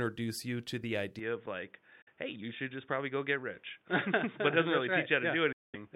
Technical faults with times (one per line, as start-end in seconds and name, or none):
1.19-5.96 input switched to a poorer device
2.02-2.08 Bluetooth dropout
5.52-5.76 Bluetooth dropout